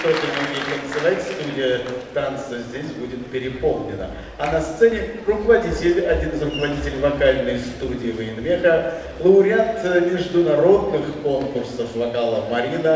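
No technical faults are audible.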